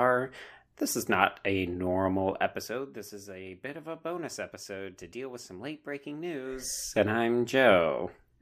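A speech clip with a ticking, zipping texture laid over the voice from 2.46 to 2.84 s, just after "is not a normal", as the level drops by roughly 15 dB, and again from 6.49 to 6.94 s, after "with some late breaking", as it climbs back by about the same amount. This is zipper noise: the gain moves in small unsmoothed jumps, around a hundred per second, and each jump leaves a tiny click in the waveform.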